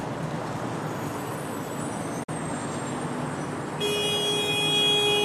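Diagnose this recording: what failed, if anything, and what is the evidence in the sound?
A digital broadcast dropout at the receiver. The sound fades out over about 8 ms at 2.23 s and returns at 2.33 s. The roughly 43 ms of lost audio fits a single corrupted frame muted until good data resumed.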